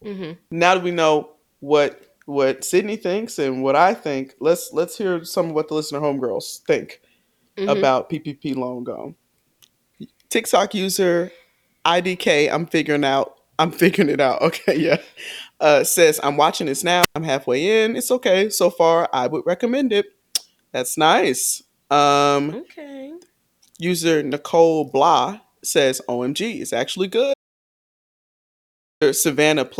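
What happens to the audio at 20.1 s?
Nothing goes wrong at 20.1 s; the audio carries on intact through that moment with no dropout, click or distortion.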